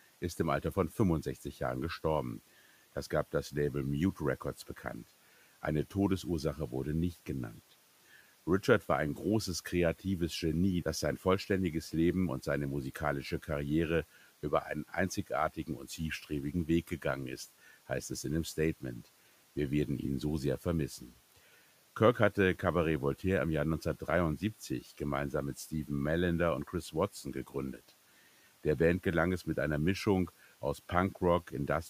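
Speech cut by the noise suppressor, at 0.73–1.59, 14.43–15.18, 15.54–17.05, 24.4–25.0 and 26.67–27.9 s. It mistook brief speech for noise. Those moments dip by about 7 to 11 dB, sounding swallowed.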